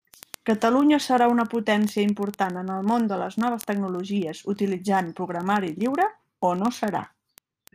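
From about 0.12 s right through to the end of the speech, there's a steady train of word clock ticks, roughly every 20 ms, so a few hundred of them. The receiving device is running on its own clock rather than locking to the sender's, and the two are drifting apart by something like a tenth of a percent. Every time they slip past each other, a single sample gets dropped or doubled, and you hear that as a sharp click.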